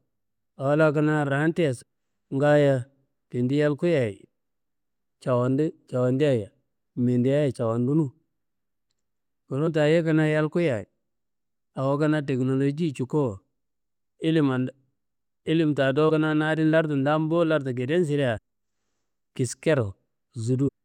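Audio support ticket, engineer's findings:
Damaged data in a compressed stream: brief glitches in speech at 1.81 s, 9.66 s, 16.08–16.10 s, 18.37–18.39 s, 20.67–20.69 s. Decoder/input stream: corrupt frames misread, sync lost until next header.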